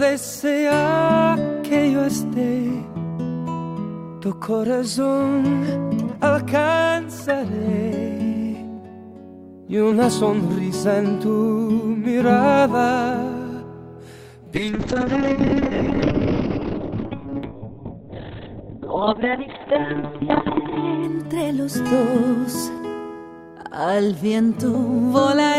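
From 14.56 s to 22.09 s, a call bitrate drop narrows the bandwidth from 20 kHz to 4 kHz and coarsens the coding, which fits a fall from 64 to 6 kbps, worst for about 5 s. Unlike packet loss, the sound never breaks off. It stays continuous and degraded, then clears.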